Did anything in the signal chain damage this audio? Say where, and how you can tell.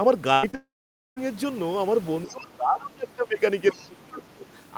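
Yes, in several places, all at the network and call-processing stages.

The first is a burst of packet loss at the network stage, from 0.33 to 0.45 s. About 100 ms of audio never arrived in time, and the receiver spent roughly 93 ms continuing the last sound and fading it down. That is why a held, decaying buzz or hiss sits where speech should be. Playback then picks up further along, with the lost stretch simply gone.

Next is a short concealed packet loss, also at the network stage, from 0.51 to 0.55 s. About 20 ms went missing, and the decoder patched it with about 23 ms of extrapolated signal before crossfading back into real audio. You hear it as a brief smear just before the larger gap that follows.

Directly after it comes what is likely a long network dropout, from 0.55 to 1.18 s. Some 620 ms of audio was lost. Concealment stretched the last sound into a fading buzz or hiss, and about 500 ms of that span is silence once the fill runs out. 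The speech resumes at 1.18 s without the missing portion, which is the signature of a stream interruption rather than a pause in talking.

The call-processing stage also lets the other side's voice leak through, at 2.26 to 2.47 s and again at 3.71 to 3.84 s. A faint second voice sits around 25 dB below the talker. The likely cause is the far end playing on a loudspeaker and the echo canceller failing to remove all of it from the microphone pickup, so scraps of the remote talker get through.

Overlapping those leaks is speech suppressed in double talk, also in call processing. From 2.27 to 3.4 s the talker drops by as much as 20 dB over about a second in total, and from 3.72 to 4.48 s by up to 25 dB over about 0.7 s. The likely cause is the echo canceller clamping down while both sides spoke at once, unable to separate the local voice from the echo.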